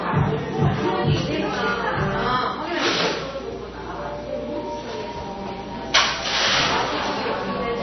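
A recording of sounds with plainly audible codec damage from start to finish, most likely from MP3 compression at a very low bitrate, on the order of 24 kbps. Nothing survives above about 6.1 kHz, and the remaining band has a watery, swirling quality where weak components flicker in and out. On a spectrogram this appears as a hard horizontal ceiling at 6.1 kHz, with patchy, blocky gaps below it as individual frequency lines switch on and off from frame to frame. From 5.27 s to the end, a filter restarted on every block adds a regular buzz at 86.1 Hz that rises and falls with the loudness of the sound. That rate fits a 512-sample block at 44.1 kHz, with each block starting again from silence and beginning with a small click. On the waveform this shows as evenly spaced tiny spikes about 11.6 ms apart, and on the spectrogram as thin vertical stripes at the same spacing, stronger where the signal is louder.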